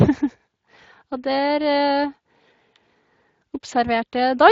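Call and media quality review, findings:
Speex codec artefacts across the whole speech clip: hoarse, noisy texture, plainly audible. Sparse excitation coding in the CELP codec, which fits a Speex mode near 20 kbps. Spectrogram: blurred harmonic striations with noise between them. Waveform: grainy, less defined pitch periods.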